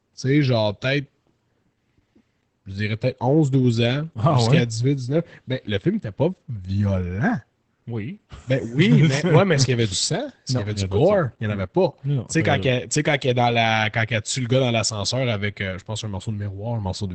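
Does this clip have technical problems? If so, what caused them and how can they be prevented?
Yes. Opus voice compression runs throughout: its linear-prediction coder quantises the excitation coarsely, plainly audible, and nothing remains above 8.7 kHz, which fits roughly 12 kbps. Encoding speech at a higher Opus bitrate, or keeping an uncompressed copy, prevents this.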